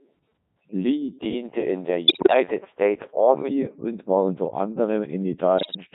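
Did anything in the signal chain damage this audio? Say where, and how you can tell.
Yes, at the codec stage throughout. The whole clip has the robotic, buzzy quality of the Codec 2 vocoder, heavily damaged and consistent with its 3.2 kbit/s mode. The decoder rebuilds speech from a pitch value, voicing decisions, energy and a coarse spectral envelope, so none of the original waveform survives. On a spectrogram, voiced sections show neat, over-regular harmonic combs under a smoothed envelope. The waveform looks synthetic rather than natural, with frame-to-frame steps.

There are also bit errors on digital voice radio, in the radio channel feeding that decoder, at 2.08 to 2.34 s and 5.58 to 5.76 s. There the voice lurches in pitch and level and breaks into warbling, bleepy gibberish. Each corrupted parameter skews a whole frame, and the second burst sounds worse, as if about one bit in seven were flipped. 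A spectrogram shows harmonics jumping abruptly between frames, and the waveform shows blocky envelope jumps.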